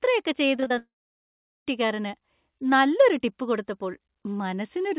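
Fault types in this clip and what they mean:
Repeated packet loss (robotic sound): Between 0.56 and 0.72 s the speech turns choppy. There are four short holes in that stretch, the longest about 22 ms, and each one gets patched by stretching out the sound just before it. About 80 ms of the 160 ms span is patched rather than real, so half of it is fake fill. That rapid cut-and-patch cycle is what gives it the robotic edge.
Long network dropout: Right after that, from 0.78 to about 1.68 s, the audio just goes away. You hear a short buzzy carry-over of the last sound that fades out, then around 0.77 s of silence. When the speech comes back, roughly 0.88 s of it is simply gone and never played. The likely cause is a network outage where nothing arrived for almost a second. Since this runs over a G.711 call path, the fill and the return are both band-limited to 4 kHz.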